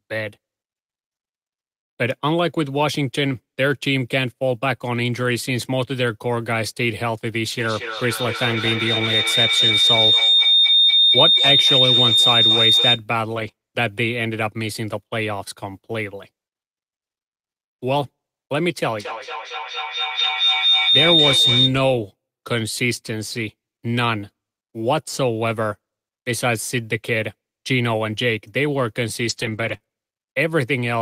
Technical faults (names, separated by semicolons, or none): feedback howl; lost packet rebuilt from error correction; short concealed packet loss